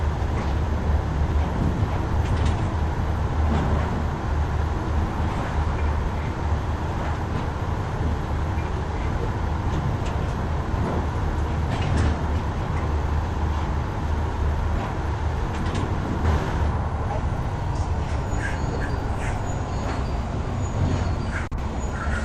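Nothing stood out as a technical problem on listening to this audio.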